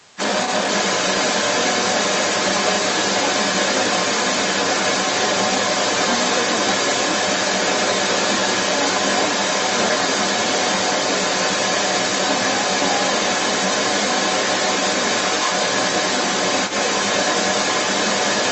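Right from the start and through the whole 18 s, the other side's voice is leaking through, sitting roughly 10 dB above the talker's own speech. The likely cause is the far end playing out of a loudspeaker and the echo canceller missing a big chunk of it.

At 0.04 to 0.16 s there's speech suppressed in double talk. For about a tenth of a second the talker's level dips by something like 15 dB. Most likely the canceller couldn't tell the talker from the echo and pulled both down together.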